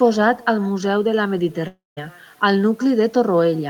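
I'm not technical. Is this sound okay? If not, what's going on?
No. Two things are wrong. The first is echo with no canceller. The person at the other end of the call has their loudspeaker playing your voice back into their microphone, and nothing on their side removes it. Your voice travels there and back across the network. Throughout the clip, everything said is followed roughly 0.4 seconds later by a faint, thin copy of itself, like a quiet shadow trailing behind.

The second is a long network dropout, likely a gap where the connection briefly stopped delivering sound. From 1.67 s to 1.99 s, the receiving end had nothing new to play. It stretched out the last bit of sound into a fading buzz, which then gives way to silence. When the audio resumes, about a third of a second of what was said is simply gone and never comes back.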